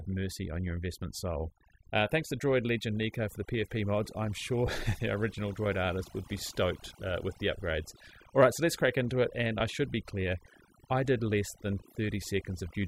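Overdone noise removal runs through the whole of this speech recording. Set too aggressively, the reducer pulls individual frequency bands down hard whenever they sit close to its estimate of the noise floor, and the softer components of the voice get caught along with the noise. The background drops and breaks up into twinkling specks. Lost LE Audio frames appear at 4.67 s, right after "mod I'm sure", and at 9.6 s, between "crack into it and" and "I should be clear". Each gap is about 10 ms, which fits a single lost LC3 frame. The decoder fills the hole by reusing the previous spectrum with randomised signs, so for that instant any tonal content smears into a brief noisy blur.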